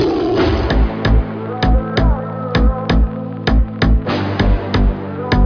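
No technical fault can be heard anywhere in this audio. Nothing in the sound points to a problem in how it was captured or reproduced.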